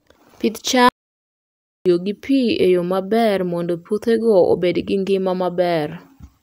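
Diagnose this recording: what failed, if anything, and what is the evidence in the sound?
Playback stall at the playback stage. Speech goes silent at 0.89 s and resumes at 1.86 s, before "gi pi e yo". Likely the player ran out of data.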